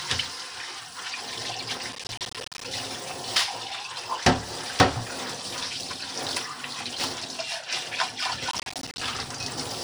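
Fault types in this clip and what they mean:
Processor overload crackle: The processor falls behind and misses many short buffer deadlines in a row. Each missed buffer drops out as a brief hole of silence with hard edges. Dozens of these holes pile up into a gritty, tearing crackle over the sound. It happens in two bursts, from 1.93 to 2.65 s and from 8.51 to 9.01 s. The spacing of the clicks points to buffers of around 10 ms.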